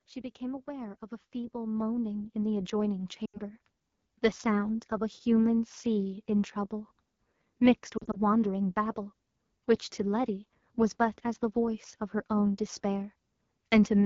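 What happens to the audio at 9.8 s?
At 9.8 s the speech carries the AMR wideband (HD Voice) codec damage that runs through the whole clip. The codec models the voice up to 6.4 kHz from a pulse-excited vocal tract filter and fills the 6.4 to 7 kHz band with shaped noise. The damage is plainly audible as rough, raspy speech, which fits one of its lowest rates, around 8.85 kbit/s. The shaped noise up near 7 kHz sets it apart from narrowband telephone coding, which loses everything above about 3.4 kHz.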